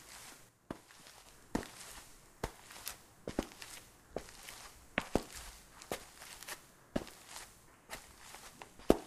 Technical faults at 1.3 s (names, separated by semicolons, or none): sudden gain jump